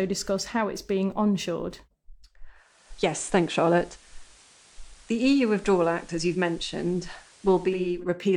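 From 2.54 s to 8.05 s the digital radio blends to analogue FM, cross-fading over 0.48 s after losing the digital stream. Faint hiss enters at unchanged level. A spectrogram shows a lifted noise floor between phrases.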